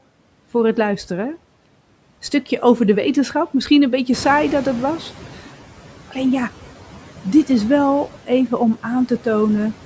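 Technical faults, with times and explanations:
Throughout: noise suppressor artifacts. The suppressor estimates the steady background in each frequency band and pulls those bands down frame by frame, by about 11 dB. The noise drops away in the pauses and comes back underneath the speech, since the speech bands cannot be cut without cutting the speech.
4.12–5.41 s: noise suppressor catching up. Just after "een beetje", the room noise jumps by about 12 dB, to about 16 dB below the speech. The suppressor's noise estimate trails this rise, so at first the louder noise passes with only about 8 dB of reduction. It sinks over 1.29 s as the estimate adapts.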